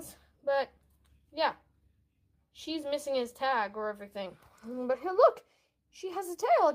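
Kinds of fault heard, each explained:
No audible faults of any kind are present in the recording.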